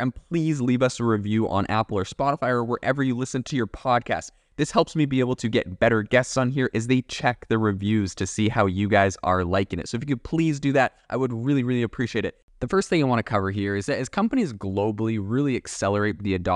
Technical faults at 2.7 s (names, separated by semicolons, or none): none